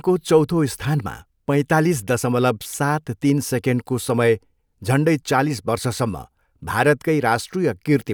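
A speech recording with no technical fault to report. Nothing audible at any point calls for a time or a cause.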